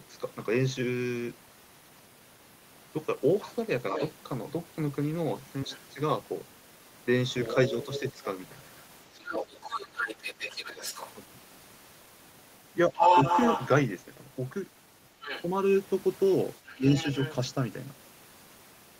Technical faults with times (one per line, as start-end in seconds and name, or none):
3.44-17.35 other side's voice leaking through
5.65-8.17 speech suppressed in double talk
12.89-12.95 speech suppressed in double talk
16.76-17.06 speech suppressed in double talk